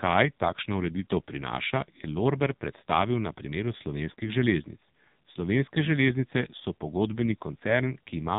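AMR narrowband mobile codec damage runs through the whole clip. The speech has been rebuilt from a mobile-call vocal-tract model, with nothing above 3.8 kHz, and the heavily buzzy, synthetic tone fits one of AMR-NB's lowest modes, near 5.9 kbps.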